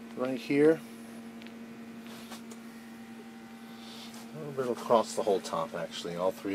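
A steady 100 Hz buzz runs throughout, from a block size mismatch (truncated): each block's tail is discarded at that rate, while playback speed stays unchanged.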